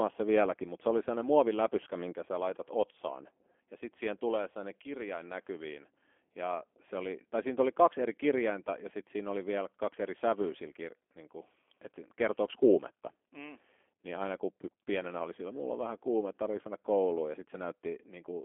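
G.729 codec damage runs through this entire speech clip: energy is confined to roughly 300 Hz to 3.4 kHz, and the rough, slightly synthetic texture fits an 8 kbit/s G.729A stream that resynthesises each frame from a vocal tract filter, pitch predictor and sparse pulses.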